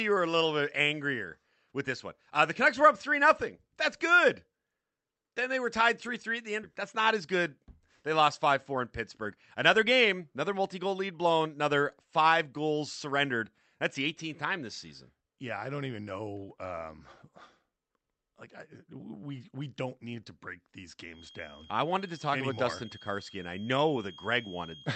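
Skip ahead at 6.63 to 6.65 s in this speech recording: right after "three at the end", most of a second of audio vanishes and the two sides are spliced together with no gap. With later audio already waiting, a stretch was dropped in transit or discarded by the jitter buffer when it overflowed, so the conversation jumps forward and the receive delay shrinks by the same amount. Jitter buffer speed-up follows at 8.46 to 8.77 s, at 112% of normal rate, and again at 9.22 to 11.55 s, at 108%, ending just before "five goals surrendered". Pitch stays put, but the talker sounds rushed. The buffer was holding more audio than its target, as happens when delayed packets arrive in a clump. To work that backlog off, the receiver repeatedly cut out short slices of one or a few pitch periods, removing a few tens of milliseconds in the first burst and about a fifth of a second in the second. A feedback whistle starts at 21.08 s, after "need to break these", and lasts to the end of the clip. 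It is a thin, steady tone at 3.2 kHz sitting about 25 dB under the speech and swelling and fading slowly in level. The likely cause is a loudspeaker-to-microphone loop poised just at the edge of feedback, letting that single frequency ring on without building up. All of this passes through an Opus call path whose band stops at 8 kHz.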